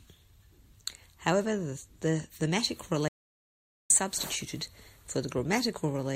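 A speech recording in which the sound cuts out abruptly right after "the thematic" at 3.08 s and returns mid-flow at 3.90 s, leaving about 0.82 s of dead, total silence with no room tone underneath. This is an audio dropout to silence: the input was likely lost for that moment, through a disconnected device, a failed link or a stray mute, while the recorder kept writing zeros, so whatever was spoken in that gap is simply missing.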